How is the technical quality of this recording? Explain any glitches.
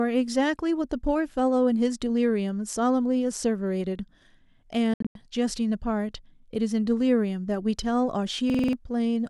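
Two glitches break up the speech, one a run of gaps and one a repeating stutter.

From 4.94 to 5.15 s there is a Bluetooth dropout. The sound cuts out in several short holes spread over about 213 ms, losing around 171 ms in all, with the longest single gap near 85 ms. The likely cause is that packets missed their deadline on the wireless link and were discarded, which fits roughly eight dropped packets. The speech then resumes further along, as though it had kept playing through the silence. That is the key difference from the loop below: nothing is repeated, only removed.

From 8.50 to 8.73 s there is a system hang loop. The computer or driver stalled while the audio hardware kept replaying its ring buffer, so one 46.44 ms slice sounds five times in a row, fitting a 2048-sample buffer. At 21.5 repeats per second this comes across as a rapid machine-gun stutter rather than a steady buzz. 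About a fifth of a second of the original audio is lost. Unlike the dropout, the stutter fills the gap with identical copies of one slice instead of silence.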